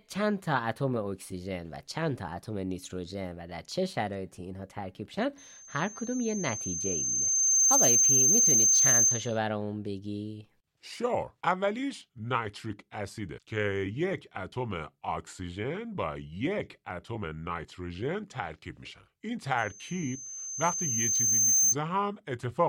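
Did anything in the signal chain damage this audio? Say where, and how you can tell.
Yes, a loudspeaker feedback squeal in the playback-to-mic loop. A 6.3 kHz tone swells over a couple of seconds at 5.37–9.38 s and 19.58–21.76 s, ending up roughly 10 dB above the speech.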